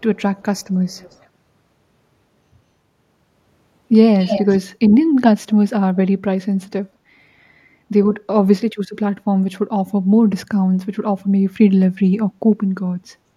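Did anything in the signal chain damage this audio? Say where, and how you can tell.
Yes, at the call-processing stage: an echo leak. A faint delayed copy of the speech trails it at 0.36–0.7 s (186 ms late) and 0.91–1.26 s (217 ms), then comes back nearly as loud as the speech at 4.19–4.57 s. The likely cause is a speakerphone whose echo canceller let its own pickup through.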